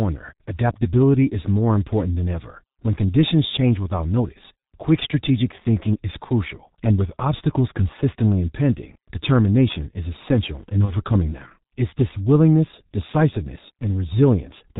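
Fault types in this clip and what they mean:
G.723.1 codec: The whole clip passes through this early internet-telephony codec, and the damage is heavy. Nothing survives above 4 kHz, so the speech is muffled and hoarse and consonants smear together. The coarse quality fits the 6.3 kbit/s mode. On a spectrogram the energy stops at a hard ceiling near 4 kHz, harmonics look blurred, and changes step at roughly 30 ms intervals instead of moving smoothly.
VoIP packet loss concealed by the speech codec: Just after "determination is essential in", from 10.85 to 10.94 s, the audio briefly turns into a weakened, stretched continuation. A packet went missing, which fits one lost 30 ms frame, and the decoder filled the gap by repeating its last pitch and filter at reduced gain. Because each frame builds on the previous one, the weakness lasts past the gap. The waveform shows a dip in amplitude.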